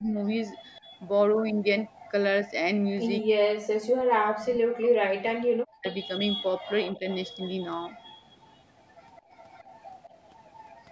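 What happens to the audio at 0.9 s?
The speech dips by roughly 10 dB from 0.8 to 0.91 s, speech suppressed in double talk, likely an echo canceller ducking the talker while the far side spoke.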